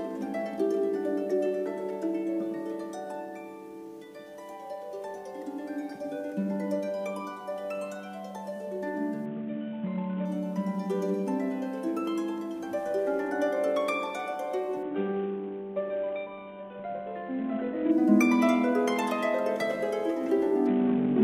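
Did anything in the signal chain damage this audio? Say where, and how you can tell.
Yes. The codec stage damaged it over the Bluetooth link. From 9.26 to 10.25 s, from 14.83 to 17.91 s, and again from 20.67 s to the end, the treble suddenly goes dull and a gritty, grainy noise rides on the sound, then clears when full quality returns, except in the last stretch, which runs to the end. That is a Bluetooth SBC bit pool drop. The sender cut its bit budget, which fits a fall from a bit pool of 28 to 5, near 54 kbps, so the upper sub-bands were starved and the rest coarsely quantised.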